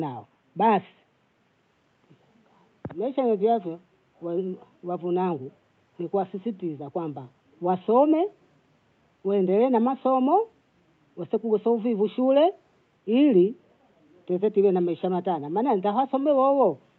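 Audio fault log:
No fault to log for this audio.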